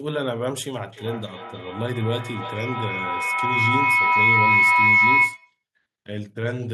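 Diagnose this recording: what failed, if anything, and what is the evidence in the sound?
What failed is a feedback howl. It's an acoustic loop at the call stage, from one device's loudspeaker back into another device's microphone on the same call. It starts at about 0.93 s, swells until it's about 9 dB louder than the speech, and runs to 5.63 s. It narrows to a tone around 2 kHz and pulses roughly every third of a second, which is the loop's round-trip delay. Each pass gains level, so it keeps building until the loop is broken.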